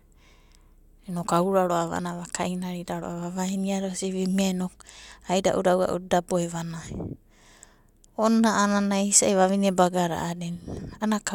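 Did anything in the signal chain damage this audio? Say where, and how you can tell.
No, nothing in the signal chain damaged this audio.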